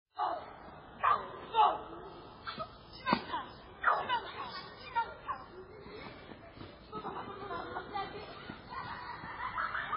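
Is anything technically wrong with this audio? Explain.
Yes. Throughout, the audio likely passed through heavy MP3 compression at a bitrate that fits about 16 kbps. Starved of bits, the encoder discarded everything above 5.3 kHz and switched weak frequency lines on and off between frames, leaving a dull, watery, swirling sound with smeared attacks.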